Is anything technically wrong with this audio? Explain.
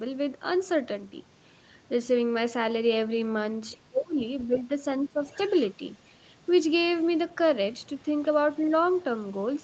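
Yes, there are two related echo-cancellation problems here.

First, the other side's voice leaking through. A faint second voice shows up at 3.70–3.77, 4.40–4.63, 5.28–6.06, 7.02–7.06 and 7.98–9.45 s, sitting well under the talker, roughly 25 to 40 dB down. It's likely loudspeaker playback that the echo canceller didn't fully strip from the mic.

Second, speech suppressed in double talk. From 3.81 to 4.72 s the talker's level dips, by as much as about 30 dB, and there's a shorter dip of about 15 dB at 5.08–5.20 s. With both sides talking at once, the canceller likely couldn't separate the talker from the echo, so it turned everything down.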